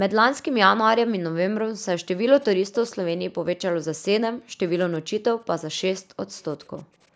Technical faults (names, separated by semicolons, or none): background gated by the echo canceller; echo leak